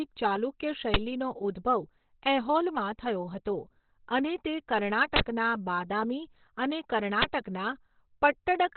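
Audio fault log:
Throughout: Opus compression. The speech sounds muffled and hoarse, and nothing is heard above about 4.2 kHz. This narrowband sound likely comes from Opus in its SILK speech mode, at a rate near 12 kbps. At such a low rate the encoder cuts the bandwidth and models the voice coarsely. The damage is heavy. Consonants lose their crispness, and the voice turns hoarse.
5.16–5.20 s and 7.22–7.24 s: uninitialised buffer. Two short, loud bursts of digital noise break through the speech. The first lasts 40 ms and the second 20 ms. Each block was sent to the output before any audio had been written to it. The player therefore read leftover memory as samples. Those values bear no relation to the signal, so they come out as harsh noise rather than sound.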